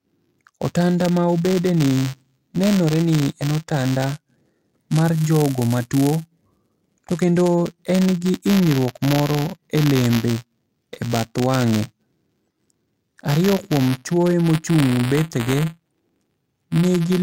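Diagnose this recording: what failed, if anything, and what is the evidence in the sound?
Buffer tearing at the driver or buffer stage. A robotic buzz near 172 Hz runs through the whole clip wherever speech is present. That rate fits a 256-sample buffer. Each period, a small slice holds audio about 10 ms old, spliced in with hard joins.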